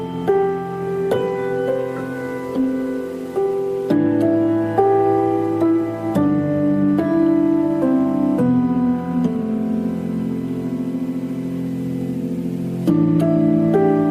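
Computer activity noise runs through the whole clip. A faint buzz sits under the audio from start to finish. It pulses at roughly 1 kHz, giving it a whining, chirpy edge. It stays about 35 dB below the sound itself, so it is quiet. It follows the computer's workload, not the audio. Processor, graphics or mouse activity shifts the shared ground of the audio circuit, and that shift leaks into the signal as noise.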